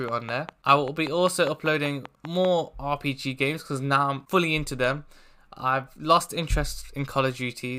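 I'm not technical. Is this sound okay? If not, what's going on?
No. From 0.09 to 2.46 s there's a train of clicks: about fifteen evenly spaced ticks, five per second, most likely interference or a faulty connection or power supply.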